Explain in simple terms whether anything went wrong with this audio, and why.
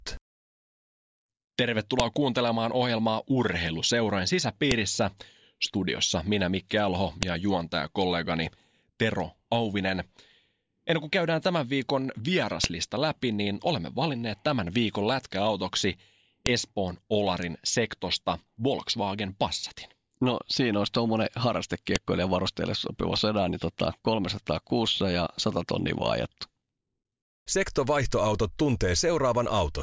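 Yes. Six sharp clicks cut through the speech at 2.00, 4.71, 7.23, 12.64, 16.46 and 21.96 seconds. This is a file header played as audio: the recording was stitched from separate pieces, and each piece's header data got played as sound instead of being stripped out.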